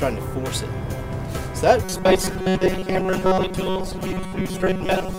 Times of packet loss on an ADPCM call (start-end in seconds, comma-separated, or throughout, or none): none